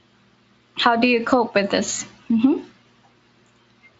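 No technical faults can be heard in this speech.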